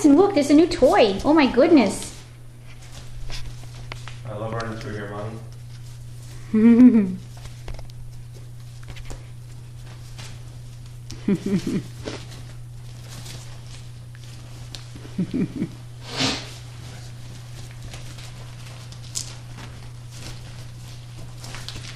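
The signal shows no technical faults at any point, with no breaks, level problems or distortion present anywhere in the audio.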